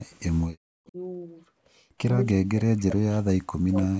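From 0.6 to 0.97 s, 2.33 to 3.73 s, and 3.9 s to the end, speech is suppressed in double talk. The echo canceller likely could not tell the near talker from loudspeaker echo while both sides spoke, so it turned everything down. The speech dips by as much as about 40 dB and breaks up in pieces, for around a second in the longest stretch.

Inside that stretch, from 2.77 to 2.81 s, comes an echo leak. Loudspeaker sound that the canceller failed to remove was likely sent back, and it is heard as a brief, faint scrap of the speech repeated 270 ms late, roughly 35 dB below it.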